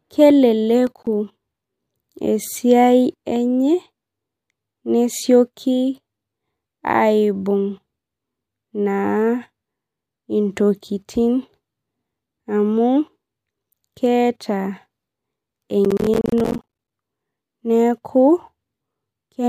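Speech, with two bursts of processor overload crackle: a short one from 0.87 to 1.07 s and a longer one from 15.85 to 16.92 s. The processor falls behind, and missed buffers of around 10 ms each come out as silence, a handful in the first burst and a few dozen in the second. The hard-edged gaps make a gritty tearing. Unlike a single dropout or clipping distortion, it is a dense run of tiny gaps.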